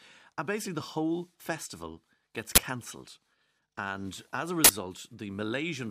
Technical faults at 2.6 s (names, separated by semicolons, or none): uninitialised buffer